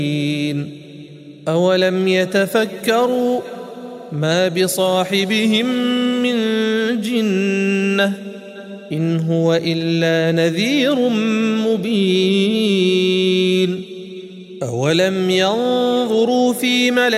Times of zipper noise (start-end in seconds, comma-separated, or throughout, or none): none